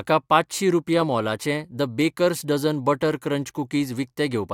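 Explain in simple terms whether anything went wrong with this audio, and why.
Nothing went wrong here: the speech recording comes through as a steady, intact signal, with no technical problems to be heard anywhere in it.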